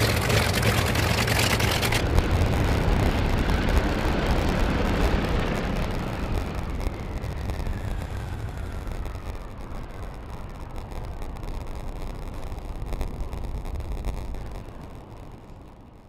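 A block size mismatch (padded) runs from start to end. One stage hands over shorter blocks than the next stage takes in, and the shortfall in each block is filled with silence. The result is a steady buzz at about 93.8 Hz, which fits a 512-sample read block, and the audio plays back slower, at 0.938 times normal speed, while staying at roughly its usual pitch.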